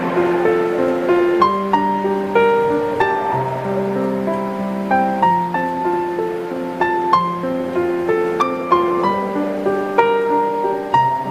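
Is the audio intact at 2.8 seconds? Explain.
Yes, the audio is intact at 2.8 seconds, with no dropout, click, distortion or other fault at that moment.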